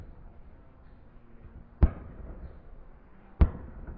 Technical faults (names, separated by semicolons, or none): wrong sample rate